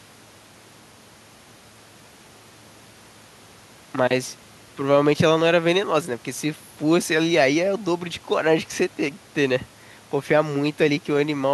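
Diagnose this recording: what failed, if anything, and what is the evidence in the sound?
Nothing failed; the speech carries no audible fault.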